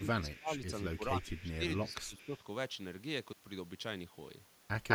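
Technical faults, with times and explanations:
0.00–0.76 s, 0.97–1.63 s and 1.83–2.34 s: speech suppressed in double talk. The voice sinks in level, falling by roughly 20 dB in the first stretch and about 10 dB in the later two, for a few tenths of a second each time. The cause is likely an echo canceller that could not tell this talker from the loudspeaker echo during overlapping speech and turned both down together.
0.32–0.39 s, 1.22–1.37 s, 1.77–2.38 s and 4.88–4.94 s: echo leak. A delayed copy of the voice comes back 243 ms late in the first three places, sitting about 20 to 25 dB under the speech. At the very end the copy arrives 206 ms late and is about 10 dB louder than the speech. This is likely loudspeaker pickup at the far end that its echo canceller failed to remove and sent back.
3.33–3.37 s: block of digital silence. The sound drops abruptly to silence for about 43 ms and then returns with no fade, leaving a short hole. 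A gap of that length fits a 2048-sample buffer that was not filled in time and was output as zeros.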